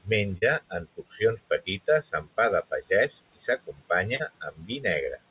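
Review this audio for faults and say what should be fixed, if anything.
Short concealed packet loss occurs at 0.38 to 0.44 s and 4.16 to 4.21 s. Each time about 40 ms of the call arrived too late. The receiver extended the preceding sound to fill the gap, then blended back, leaving a brief smear. A larger jitter buffer or forward error correction would prevent this.

Speech is cut by the noise suppressor between 0.70 and 1.21 s, and again between 4.51 and 4.84 s. The suppressor treated quiet speech as noise and lowered it, by about 12 dB and then about 15 dB. Roughly 150 ms and 100 ms sound swallowed. A gentler suppression setting would keep these parts intact.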